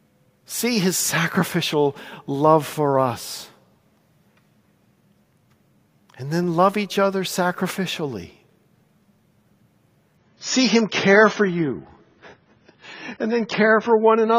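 At 3.13 s and again at 6.44 s the speech carries a single sharp click, each one a thin vertical line across the spectrum. These are most likely dropped samples: a fraction of a millisecond of the stream goes missing, so the waveform jumps straight to a later value. Nothing audible is removed and there is no silence, which separates these clicks from a dropout, where a stretch of sound disappears.

From 10.17 s to the end, the speech abruptly drops in quality as codec artefacts rise. This is an adaptive stream at a lower bitrate: the player switched to a much cheaper encoding, and the sound fits a drop from around 96 to 16 kbit/s. The change is sudden and leaves no gap, unlike packet loss, which leaves holes, or a gradual filtering, which would not add artefacts.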